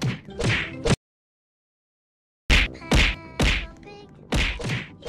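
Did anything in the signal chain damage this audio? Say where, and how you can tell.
Yes. An audio dropout to silence runs from 0.94 s to 2.50 s. The sound cuts off abruptly, then resumes mid-flow. The 1.56 s gap is silent, with no room tone. The likely stage is the input link: the source dropped while recording continued.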